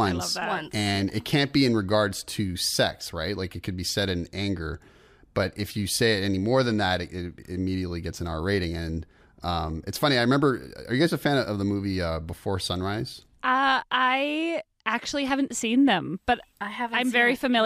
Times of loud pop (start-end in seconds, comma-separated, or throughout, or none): none